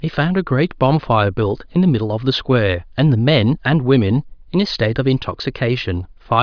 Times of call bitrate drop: none

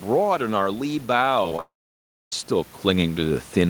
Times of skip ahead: none

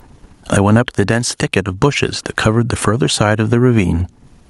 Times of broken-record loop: none

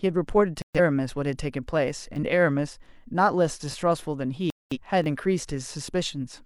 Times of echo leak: none

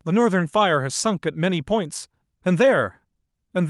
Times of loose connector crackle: none

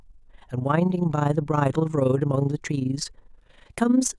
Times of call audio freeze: none

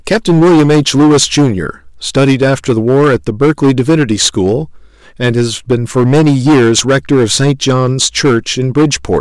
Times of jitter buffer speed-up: none

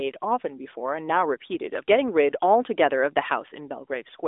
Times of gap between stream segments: none

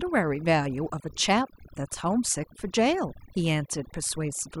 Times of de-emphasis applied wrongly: none

